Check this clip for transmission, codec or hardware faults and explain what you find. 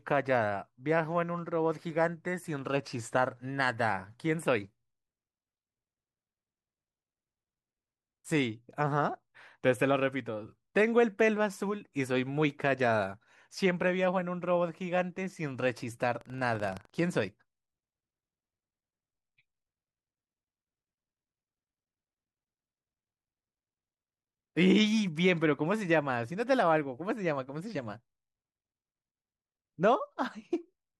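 One hardware fault stands out. From 16.17 to 16.99 s there is buffer tearing. The writing program and the reading hardware have slipped, so a small slice of each buffer replays audio about 150 ms old. The hard joins give a rattling buzz near 23.4 Hz, which fits a 2048-sample buffer.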